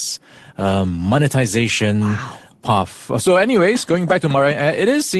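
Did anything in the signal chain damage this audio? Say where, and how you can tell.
No, nothing in the signal chain damaged this audio.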